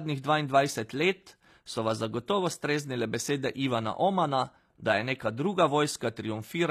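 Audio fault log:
throughout: HE-AAC compression. The speech has a bright but synthetic top end, with s sounds turned gritty and lispy and a metallic sheen in the treble. This is likely HE-AAC coding at a low bitrate, roughly 24 kbps. Only the lower band is truly coded; the treble is copied upward from it and shaped by a coarse envelope, so its harmonics fail to line up. On a spectrogram, the upper band shows smeared, repeated copies of lower-band patterns.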